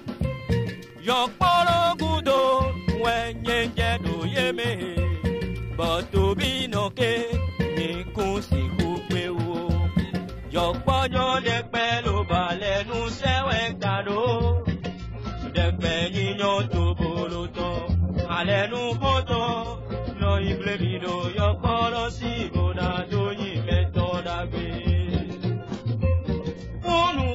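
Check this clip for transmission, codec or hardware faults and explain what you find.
One fault: an adaptive stream at a lower bitrate. From 11.11 s to the end, the stream steps down to a much lower-bitrate encoding, which fits a drop from about 96 to 16 kbit/s. The sound changes abruptly with no gap, losing everything above 7.6 kHz and turning duller, with stronger codec artefacts.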